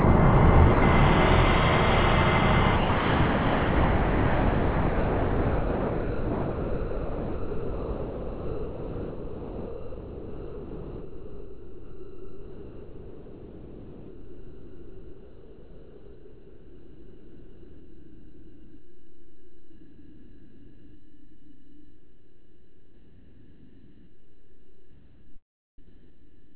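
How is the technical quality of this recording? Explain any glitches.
Poor: the audio keeps cutting out, most severely from 2.76 s to the end, over a call path that passes nothing above 4 kHz, consistent with narrowband G.711.

Sound dropped by the voice detector, at 0.00–0.04 s, 0.74–0.82 s and 2.76 s onward: the sender likely judged the sound to be background and stopped transmitting. Comfort noise fills each gap, about 13.1 s of real sound lost.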